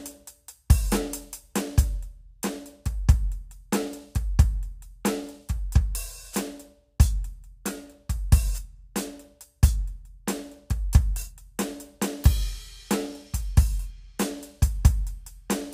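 Nothing in this music stood out as a technical problem on listening.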